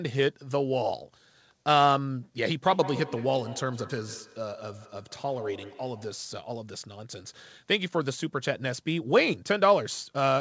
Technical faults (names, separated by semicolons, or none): feedback echo between two devices